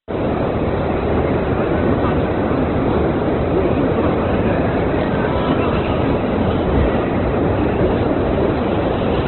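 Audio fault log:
throughout Opus compression: likely a starved encode, fitting about 12 kbps, drops everything above 4.1 kHz; the sounds come out narrow, grainy and rough.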